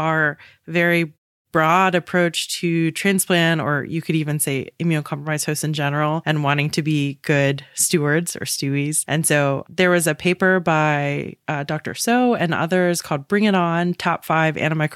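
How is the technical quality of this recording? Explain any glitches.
On listening, nothing in this speech recording stood out as a glitch, and the way the background drops to silence in the pauses between phrases and comes back in time for the next one is simply the muting working as intended.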